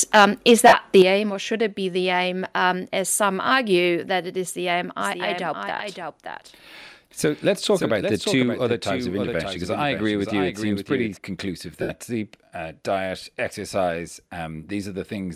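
From 0.14 to 1.02 s there is microphone overload, with peaks driven about 5 dB past the converter's ceiling, most likely because the input volume was set too high. A small share of samples are flattened at the top, giving the loudest syllables a harsh, crackling edge.

Inside that stretch, between 0.68 and 0.74 s, lost LE Audio frames remove about 52 ms of sound spread across 60 ms, which fits seven 7.5 ms frames, with most of the loss in one run. The LC3 decoder fills the gap by repeating the last spectrum with scrambled phase, so the tone smears into noise. At 11.82 to 11.90 s, just before "sleep uh diet exercise", another 75 ms loss produces the same noisy smear, fading toward silence as the concealment gives out.

At 1.02 s, right before "aim or should it", the microphone volume is stepped down by about 8 dB, likely the call software reacting to the clipping, and the voice and background drop together in one abrupt step. 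At 8.43 s a second step cuts the level by about 3 dB, a smaller sudden drop. The light lossy compression stays faint beneath these faults.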